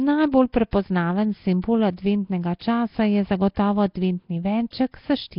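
From the very start the speech has a rough, hissy halo and a smeared, underwater feel, with nothing above about 5.3 kHz, so it sounds dull. That's most likely Nellymoser compression, the old Flash microphone codec, heavily squeezed at a rate that points to roughly 22 kbps. It codes short blocks with a fixed, small bit budget, so weak bands get no bits at all and are simply filled with noise. That's where the fizz comes from.

On top of that there's pre-echo on sharp onsets at 0.32 s, 0.71 s, 1.62 s, 2.59 to 2.61 s and 4.71 to 4.73 s, each spreading about 16 to 21 ms ahead of the attack. Because the codec spreads its quantisation noise across the whole block, an attack landing late in a block drags hiss into the quiet just before it. You get a brief smear of noise leading into each hit, and the attack itself lands soft rather than crisp.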